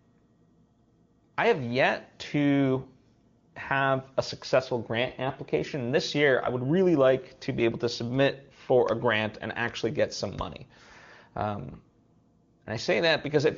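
No technical fault can be heard anywhere in this speech, which comes through the AMR wideband (HD Voice) codec with the limited top end that codec gives and nothing further wrong with the signal.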